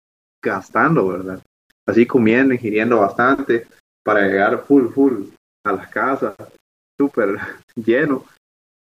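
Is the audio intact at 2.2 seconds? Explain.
No. At 2.2 seconds, as throughout the clip, the speech has likely been reduced to a low bit depth without dither, rounded to about 9 bits. The rounding error tracks the signal, so grainy distortion around 40 dB down follows the speech, roughening its quieter parts.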